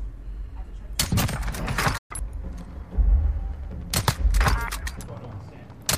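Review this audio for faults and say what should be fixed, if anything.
A playback stall silences the output from 1.97 to 2.11 s, about 120 ms, likely because the player ran out of data or its thread blocked. It is a sustained gap of silence, not a click or a brief crackle. Prevent it with deeper playback buffering and a non-blocking, higher-priority audio thread.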